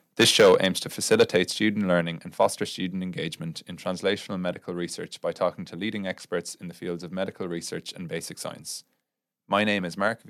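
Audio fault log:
0.19 to 0.65 s, 1.11 to 1.36 s and 2.40 to 2.46 s, microphone overload: the loudest syllables turn harsh and crackly, with flattened, gritty peaks, the last burst ending just before "student engagement in translational". The likely cause is an input volume set too high, driving the converter past its limit by about 10 dB, 6 dB and 2 dB in turn, so roughly 7, 3 and 3 percent of samples lose their tops.
0.41 s, microphone volume stepped down: partway through the first distorted stretch, voice and room background drop together by about 3 dB in a single abrupt step rather than a smooth fade. This is likely the call software reacting to the clipping by lowering the device's input volume in one step. The reduction is too small to stop the overload, since clipping returns at 1.11 s.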